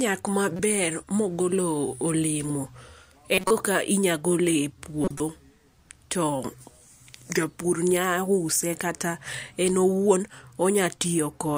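Corrupt frames decoded at 0.56, 3.34–3.51 and 5.04–5.20 s. Damaged data was played anyway, misplacing energy. Each is a brief blip, then louder bursts near -5 and -10 dBFS.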